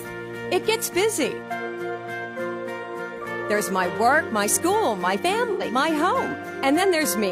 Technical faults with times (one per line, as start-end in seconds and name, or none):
5.51-5.62 AAC frame loss with concealment